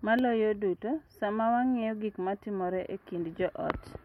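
Nothing in the speech stood out as a technical problem on listening.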